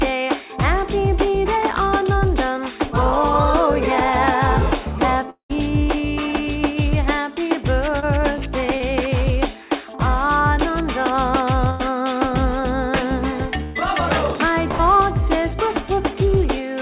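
At 5.30 to 5.51 s the sound carries on as a buzz or hiss that fades out, leaves about a tenth of a second of silence, then resumes further along with roughly 0.2 s skipped. The likely cause is a long network dropout: no audio arrived, and the receiver extended the last sound until it gave up.

At 8.00 to 8.04 s and 8.78 to 8.82 s there are brief smears, each a momentary wobble where about 20 ms of audio is absent. This is short concealed packet loss. A few hundredths of a second of audio missed the decoder, and the receiver patched each gap by continuing the preceding sound before blending back into the real signal.

At 11.70 to 11.81 s, 13.63 to 13.77 s and 14.71 to 14.81 s the sound freezes into a held, dimming buzz or hiss before jumping ahead, losing about 100, 120 and 80 ms respectively. These are bursts of packet loss, with several consecutive packets lost and the gaps bridged by fading continuation. 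The whole clip has nothing above 4 kHz, which fits a G.711 mu-law call codec.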